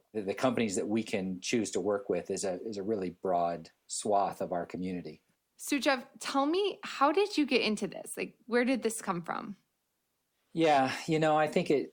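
Nothing in the signal points to a technical fault; the speech comes through as a continuous, undisturbed recording.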